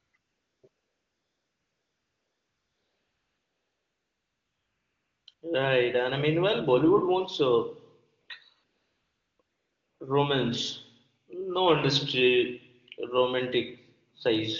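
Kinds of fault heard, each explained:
AMR comfort noise: The phone decided the talker was silent and stopped sending speech frames, so the receiver filled the gaps with synthetic noise built from a rough level and spectrum estimate. The real background gives way to smooth, steady hiss that switches in and out, longest from 0.69 to 5.27 s.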